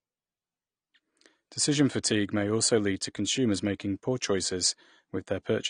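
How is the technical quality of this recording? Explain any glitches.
The speech carries one fault, present throughout: low-bitrate audio saved at a high bitrate. Nothing sits above about 9.7 kHz, which on a spectrogram shows as a flat ceiling across the whole 5.7 seconds. The dull top end points to an earlier low-bitrate encode, likely near 32 kbit/s AAC, that was later re-saved as a roughly 256 kbit/s MP3, which cannot restore the lost detail.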